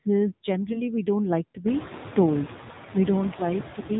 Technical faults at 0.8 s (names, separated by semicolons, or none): noise suppressor artifacts; AMR narrowband mobile codec; AMR bit errors